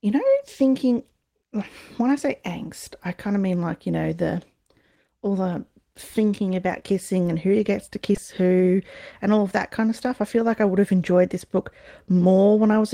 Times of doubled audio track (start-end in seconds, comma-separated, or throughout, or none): none